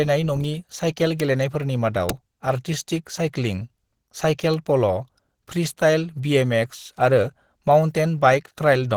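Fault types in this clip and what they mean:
Opus compression: likely low-rate Opus in hybrid mode, around 16 kbps, leaving speech plainly hoarse and grainy; spectrogram shows noise-filled, smeared bands rather than clean harmonics.
Bit error spike: single flipped bits give four sharp ticks at 0.44, 1.20, 2.10 and 4.54 s, each a one- or two-sample waveform spike and a thin full-height spectrogram line.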